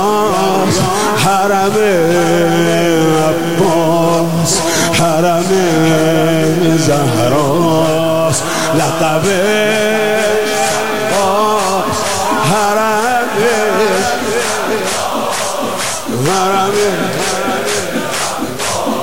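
From start to finish, the audio carries a gritty error that follows the signal, roughly 20 dB below it. This is low bit depth without dither. The likely cause is truncation to 5 bits. Quiet sounds turn grainy, or the grain becomes near-steady hiss.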